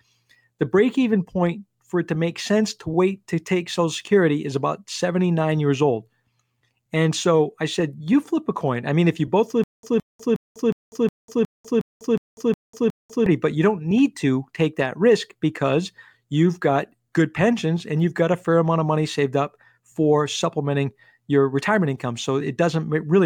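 Stutter with silent gaps, from 9.64 to 13.26 s, right after "mean if you both": a short burst of about 166 ms of speech repeats ten times, each followed by roughly 196 ms of dead digital silence, giving an even 363 ms cycle. The likely cause is a stalled player or stream that kept replaying its last fragment and then ran dry at each retry. Whatever should have played there is gone, and normal speech resumes at "but you don't need".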